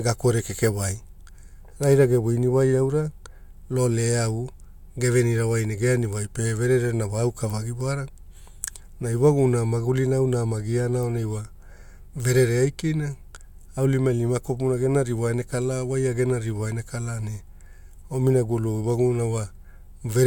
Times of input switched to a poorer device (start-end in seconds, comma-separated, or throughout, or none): none